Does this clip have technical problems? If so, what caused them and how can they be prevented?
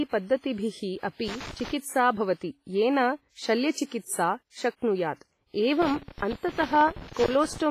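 Yes. WMA compression is audible throughout the speech: a ringing, washy quality with hiss that swells and fades with the signal, and nothing above 15.4 kHz. The damage is heavy, which fits a low bitrate near 24 kbps. The likely cause is a transform codec working with long blocks, so quantisation noise smears over tens of milliseconds and weak spectral detail is zeroed out. To prevent it, keep a lossless or high-bitrate master and encode only once.

Loose connector crackle appears from 1.28 to 1.71 s and again from 5.82 to 7.62 s as irregular bursts of crackling and scratching. A worn or dirty contact makes and breaks the connection rapidly as it shifts, chopping the signal into fragments. To prevent it, clean or replace the connector, seat it firmly, and keep the cable from moving during recording.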